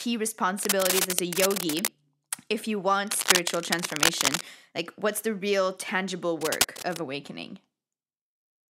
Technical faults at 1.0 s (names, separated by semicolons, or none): cable scratch noise